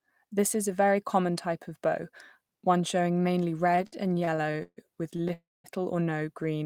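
From 3.71 to 4.80 s there's a stutter of repeated stalls: sixteen small gaps, the longest 137 ms, where the jitter buffer kept running dry and the held sound dragged.

At 5.17 s a late packet causes a short stall, with the last sound stretched for about 23 ms before carrying on from the same spot.

Then from 5.33 to 5.67 s comes a call audio freeze, likely from packets held up in transit: a fading buzz or hiss that drops into about 210 ms of silence, roughly 310 ms inserted, nothing lost.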